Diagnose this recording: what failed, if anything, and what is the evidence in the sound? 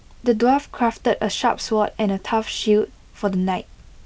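Nothing in the chain has failed: the speech comes through G.722 wideband telephone coding at 64 kbit/s, with the audio band up to about 7 kHz carried as intended and any trace of the coding no more than faint.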